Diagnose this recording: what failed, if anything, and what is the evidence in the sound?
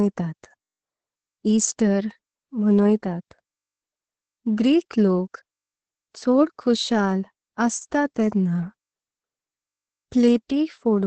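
Opus voice compression failed at the codec stage, for the whole clip. The speech is muffled, hoarse and slightly robotic, with nothing above about 9 kHz. A plain low-pass filter would only dull it; this coarse, buzzy excitation points to SILK coding at roughly 10 kbps.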